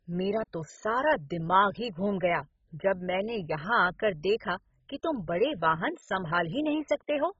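Speech, likely starved of bits by MP2 compression at a rate fitting about 16 kbps: upper sub-bands drop out above 7.5 kHz throughout, leaving dull, gurgling, granular distortion.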